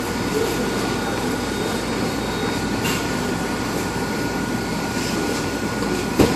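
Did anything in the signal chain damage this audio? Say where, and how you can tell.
Yes: at the codec stage, likely transcoding between lossy codecs, an MP3 pass near 54 kbit/s then WMA at 64 kbit/s, leaves stacked artefacts throughout and nothing above 13.3 kHz.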